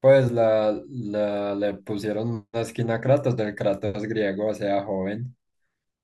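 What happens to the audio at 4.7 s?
Nothing goes wrong at 4.7 s; the speech runs through that moment intact, with no dropout, click or distortion.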